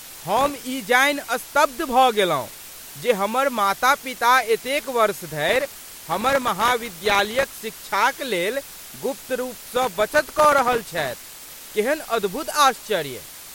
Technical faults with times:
0.00-13.54 low bit depth with dither
0.37-0.64 processor overload crackle
5.49-7.52 processor overload crackle
9.64-11.61 processor overload crackle

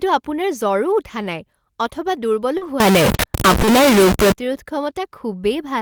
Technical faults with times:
0.53-0.55 lost packet rebuilt from error correction
2.57-2.63 short concealed packet loss
2.61-2.67 lost packet rebuilt from error correction
2.80-4.32 stuck bit
3.61-3.69 short concealed packet loss

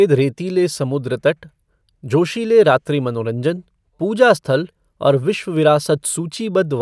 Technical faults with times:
none

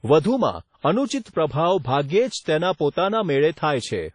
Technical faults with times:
0.00-4.14 WMA compression

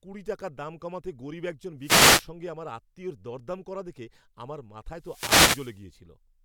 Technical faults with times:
1.79-2.29 wireless microphone noise hit
4.95-5.86 wireless microphone noise hit

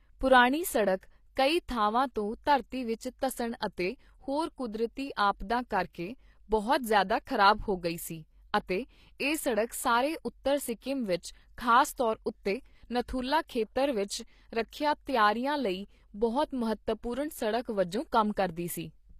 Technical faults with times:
0.00-19.19 HE-AAC compression
5.93 pre-echo

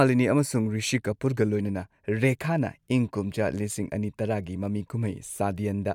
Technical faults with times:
none

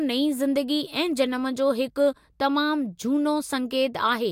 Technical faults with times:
none

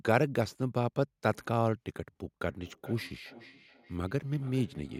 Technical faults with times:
2.45-5.00 feedback echo between two devices

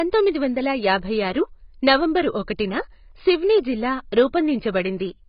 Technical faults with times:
0.00-5.28 AAC compression

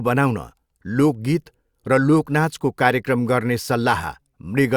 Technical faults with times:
none

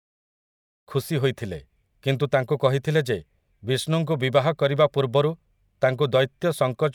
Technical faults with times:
none

